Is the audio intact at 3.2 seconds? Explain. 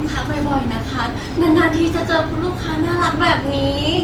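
No. At 3.2 seconds the speech carries generation loss, present throughout, likely from around seven lossy passes at something like 48 kbit/s Opus, each requantising on a shifted frame grid. It sounds swirly and hollow. A spectrogram shows smeared onsets and content up to about 20.1 kHz.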